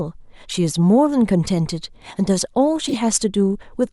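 At 0.49–0.54 s and 2.88–2.96 s, corrupt frames were decoded: misread data misplaces energy, causing brief chirping bursts, the second louder. A spectrogram shows short, misplaced smears.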